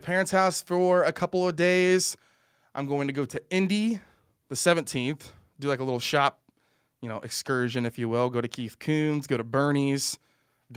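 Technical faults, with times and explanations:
No technical faults are audible anywhere in this speech recording; the signal stays continuous and stable throughout.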